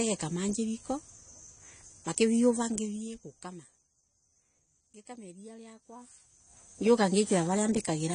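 Throughout the speech, nothing sounds above 10.1 kHz and the sound is dull and warbling, likely AAC compression, fitting about 32 kbps, not a clean low-pass filter.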